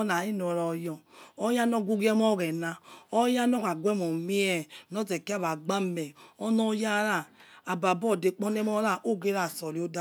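No technical faults are audible.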